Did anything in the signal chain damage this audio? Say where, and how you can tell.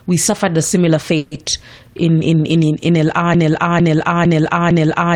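Yes. At the network stage, a call audio freeze runs from 1.17 to 1.32 s, right after "we suffered a similar". The last sound is stretched into a fading fill for about 140 ms, then speech resumes where it stopped. Nothing is lost, but everything after it is delayed 140 ms. This likely comes from late packets draining the jitter buffer.

From 3.34 s to the end there is a broken-record loop. The same 0.45 s fragment repeats exactly, back to back, four times, and the speech that should follow never arrives. The likely cause is a stalled player, encoder or stream that kept resending its last held fragment.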